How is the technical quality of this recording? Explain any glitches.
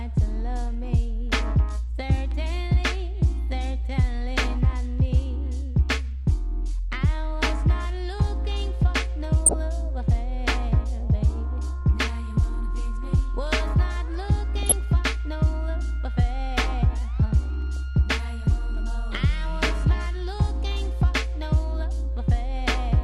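The technical quality is compromised: the whole recording carries low-rate compression damage, and three short bursts of corruption break through.

MP2 compression: The coding was likely starved of bits, consistent with a low MPEG Layer II rate of around 80 kbps. With too few bits to share among its 32 sub-bands, the encoder drops the upper bands and quantises the remaining ones coarsely. Throughout, the audio sounds plainly dull and muffled, with a granular, gurgling roughness over the top.

DAB burbling: At 9.46 to 9.56 s, 14.55 to 14.72 s and 17.76 s, uncorrected bit errors slip into the audio stream, with a few errors in every thousand bits at worst. Corrupted samples put short blips of noise into single sub-bands, and corrupted scale factors throw sub-bands to the wrong level for up to a frame. The result is brief burbling. The burst at 9.46 s is the harshest.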